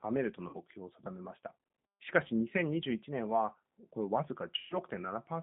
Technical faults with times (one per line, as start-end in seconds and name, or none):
0.00-5.43 G.729 codec
0.49-0.56 VoIP packet loss concealed by the speech codec
4.59-4.78 VoIP packet loss concealed by the speech codec